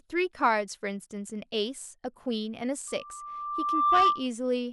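Speech with loudspeaker feedback squeal from 2.87 s to 4.27 s: the microphone picks up its own loudspeaker, and a tone at 1.2 kHz rebuilds itself over about a second until it sits roughly 10 dB above the speech. A spectrogram shows a single bright horizontal line; the waveform swells steadily.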